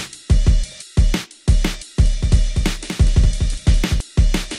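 From 2.04 s to 4.00 s a doubled audio track appears: a full-band copy trails about a fifth of a second behind, somewhat quieter, with no decay, likely from a second, slower capture path. Waveform and spectrogram show every event repeated, starting and stopping abruptly.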